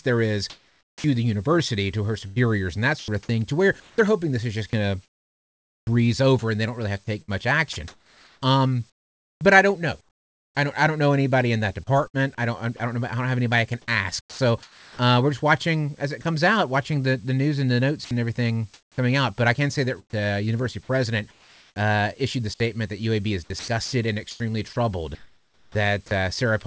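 From 0.5 to 5.87 s, 7.22 to 10.55 s (after "really have to take"), 12.08 to 12.8 s, 14.21 to 16.25 s, 18.05 to 21.76 s and 23.44 to 26.11 s, syllable edges drop into synthetic comfort noise, likely sound chopped by the voice detector. Unlike packet-loss gaps, the hiss fills each hole rather than silence.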